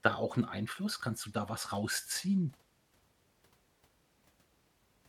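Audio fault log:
1.18–3.00 s, Bluetooth SBC bit pool drop: the speech turns dull and gritty as the link's coding rate falls, which points to a bit pool cut from 31 to 16, roughly 110 kbps.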